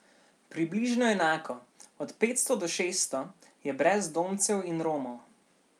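No technical faults occur at any point, so there is nothing to describe in time order.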